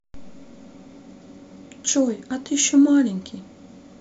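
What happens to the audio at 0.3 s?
Nothing goes wrong at 0.3 s; the speech runs on intact through that moment, with no dropout, click, distortion or other fault.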